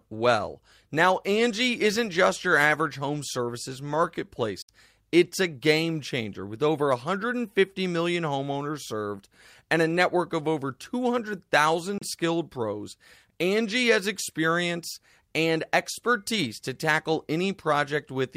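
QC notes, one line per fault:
4.62–4.69 s, digital broadcast dropout: the speech is muted for about 70 ms behind a very fast fade of roughly 3 ms, then resumes. A gap of about 64 ms fits two lost 32 ms frames. The receiver muted rather than play corrupted data, so that stretch of programme is simply gone.
11.98–12.02 s, digital broadcast dropout: a shorter hole of about 38 ms, with the same 3 ms fade, ends just before "skilled pros". Its length points to a single failed frame.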